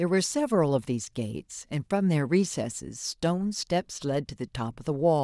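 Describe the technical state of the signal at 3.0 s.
At 3.0 s the speech signal is intact, with no dropout, distortion, clipping or other fault audible at that moment.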